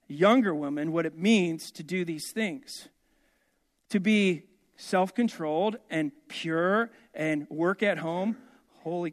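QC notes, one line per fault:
No faults found. Nothing in the recording calls for a QC note.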